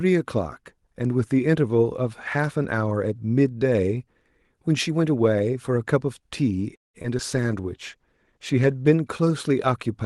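A speech recording over an Opus call path, whose coding keeps content up to about 12 kHz, breaks up from 6.75 to 6.96 s: the sound stretches briefly, then drops into near silence for most of that stretch before resuming with nothing skipped. This is a call audio freeze, likely from packets arriving late so the jitter buffer ran dry, adding roughly 190 ms of delay. Right after, two brief smears at 7.02 to 7.06 s and 7.18 to 7.21 s are short concealed packet loss: about 20 ms of audio each time never reached the decoder and was patched by extending the preceding sound. From 7.33 to 8.97 s the speech turns rougher and duller, a call bitrate drop from 32 to 15 kbps that forced coarser encoding until the rate recovered.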